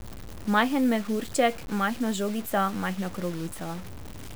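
Throughout the speech, the samples were likely cut to very few levels by truncation with no dither, consistent with about 6 bits: low bit depth without dither. The rounding error tracks the signal rather than forming a steady hiss; it sits only about 20 dB below the speech and changes shape with it. The quietest tails turn gritty, sputter between steps or drop out to silence.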